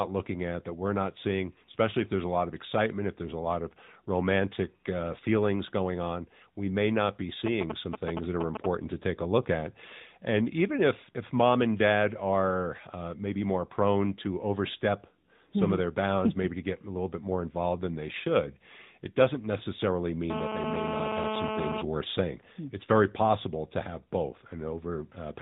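Throughout, the speech carries the AMR narrowband mobile codec: nothing above 4 kHz, and a buzzy, synthetic edge that fits a mid-rate mode of roughly 10 kbps rather than a severe low-bitrate setting. From 1.72 to 1.75 s, between "that we're not seeing" and "if there's a lot", a lost AMR speech frame leaves a brief dip and warble. It points to a single 20 ms frame concealed from the previous good one, so it is a short blur rather than a click. From 7.46 to 8.66 s, between "we may not be" and "to take a look", GSM signalling bursts break in. These are galloping dit-dit-dit ticks and short 217 Hz buzzes a few dB below the speech, from a nearby 2G phone signalling intermittently. Their broken, irregular rhythm separates them from the steady call buzz that comes later. At 19.58 to 19.62 s another single lost frame gives the same brief warble. From 20.30 to 21.82 s, ending just before "worth saying", GSM phone buzz sits about 3 dB below the speech. 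It is a hard, continuous 217 Hz rasp rich in harmonics, from a phone in an active call. It is unbroken, unlike the earlier stuttering bursts.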